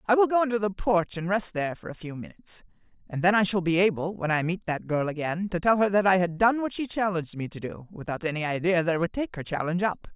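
No technical faults are audible.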